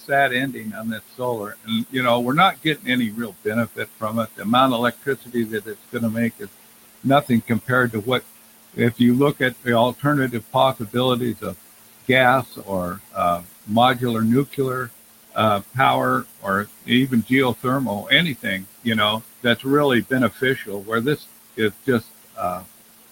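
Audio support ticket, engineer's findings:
Noise suppressor artifacts, throughout the clip. Suppressor pulls the background down by about 18 dB per frame, so the room noise, sitting about 14 dB under the speech, dips in gaps and swells under talk.

Speech cut by the noise suppressor, at 0.00–6.48 s, 7.03–8.21 s and 8.74–22.65 s. Same stage misreads quiet speech as noise. Soft consonants and word endings drop by up to about 22 dB, roughly 3 s in each long span and a few tenths of a second in the short one.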